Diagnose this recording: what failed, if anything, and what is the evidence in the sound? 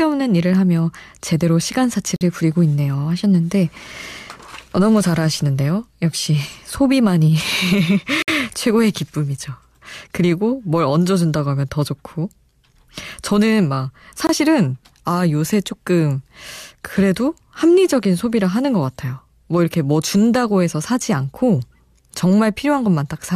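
The fault is a gap between stream segments, at the playback stage. The speech drops to hard-edged silence at 2.16 s for 48 ms, 8.22 s for 56 ms and 14.27 s for 22 ms. The six-second spacing fits segment boundaries whose timestamps leave holes, which the player fills with silence without losing any audio.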